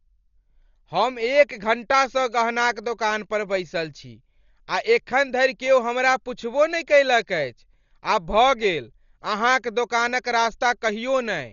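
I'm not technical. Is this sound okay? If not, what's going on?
No. All the way through, the speech sounds dull and muffled, as if heard through a blanket, with a rough, fluttery hiss clinging to the sound. Nothing reaches above about 7 kHz, so the crisp top end is gone. The likely cause is heavy Dolby Digital compression: squeezed into very little data, the encoder cut off the high end and dropped much of the fine detail, which playback then filled in with noise.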